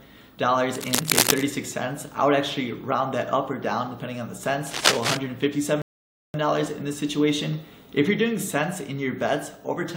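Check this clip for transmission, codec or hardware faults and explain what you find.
Two kinds of fault are present: two bursts of scratching noise and one playback stall.

Cable scratch noise, 0.75 to 1.43 s and 4.67 to 5.17 s: dense, irregular crackle, roughly as loud as the sound itself. The likely cause is a worn cable or connector being moved, its contact resistance jumping rapidly. On a spectrogram it shows as broadband speckled patches, and on the waveform as jagged spikes.

Rebuffering stall, 5.82 to 6.34 s: the sound drops to silence for about 0.52 s and then picks up exactly where it stopped. Playback ran out of downloaded audio and waited for more, so nothing is lost but time is added. It appears as a flat gap in the waveform and a blank vertical band on a spectrogram.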